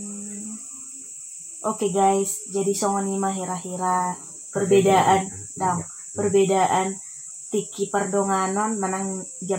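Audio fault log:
No faults heard anywhere in this clip.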